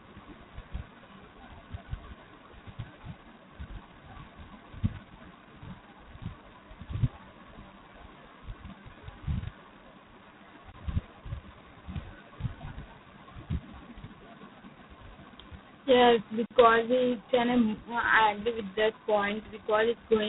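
Speech, carried throughout by G.726 ADPCM at 16 kbit/s, the codec's lowest rate. With so few bits per sample, the difference from the adaptive prediction is coded coarsely. A harsh, rasping hiss rises and falls with the speech level. Nothing passes above 3.9 kHz. There are also two blocks of digital silence. Each cuts straight to zero and back without a fade. The first runs from 10.72 to 10.74 s, a 20 ms hole. The second runs from 16.46 to 16.51 s, just before "it's an". It lasts about 46 ms, which fits a 2048-sample output buffer that was not filled in time.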